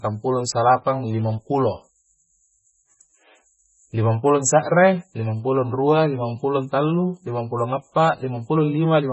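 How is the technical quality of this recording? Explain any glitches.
Quality is poor throughout the speech: it sounds dull and watery, with a swirly, metallic edge on s sounds and smeared consonant onsets, and nothing above 8 kHz. This is most likely heavy MP3 compression, consistent with a bitrate around 16 kbps. Starved of bits, the encoder cuts the treble at 8 kHz and drops weak frequency components that flicker on and off between frames.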